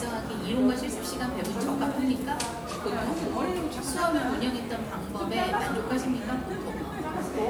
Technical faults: none

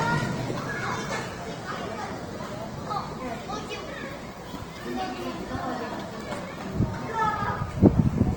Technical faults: Opus compression

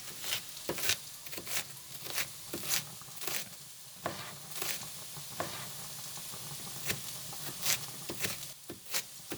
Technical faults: doubled audio track

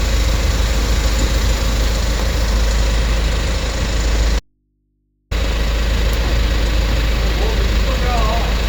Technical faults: audio dropout to a faint residue

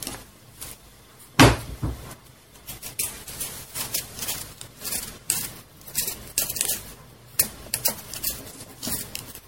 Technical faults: generation loss

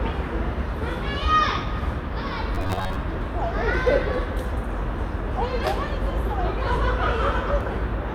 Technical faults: robotic sound from repeated short buffers

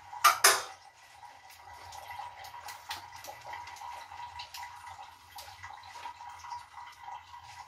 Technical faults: none

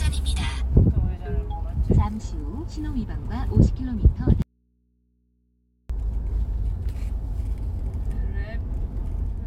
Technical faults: audio dropout to a faint residue

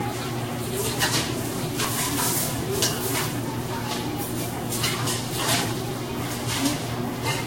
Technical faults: generation loss; audio missing between chunks

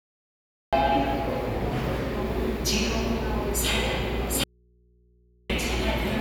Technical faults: cut-off start; audio dropout to a faint residue

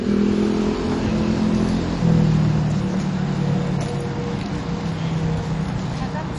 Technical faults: MP2 compression

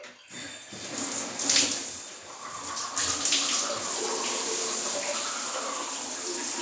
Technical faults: none

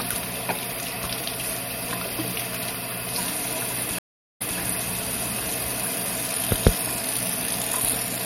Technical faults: stream reconnect

